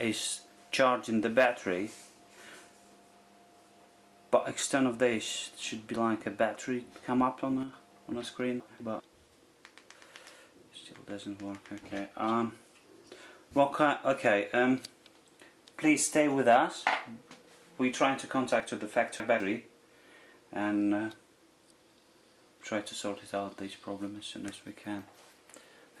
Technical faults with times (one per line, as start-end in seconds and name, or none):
7.63-7.73 sudden gain jump
8.60-9.00 chunks out of order
18.60-19.40 chunks out of order